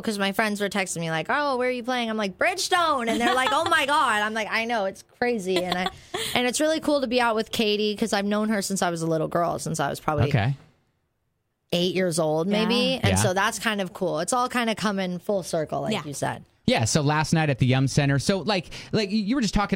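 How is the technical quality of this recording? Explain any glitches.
A fast, faint rattle of tiny ticks runs from 0.1 s to 19.74 s, roughly every 40 ms, and is clearest on loud sustained sound. These are clock slip clicks, likely from two unsynchronised devices whose clocks differ by around 700 ppm, so single samples are dropped or repeated.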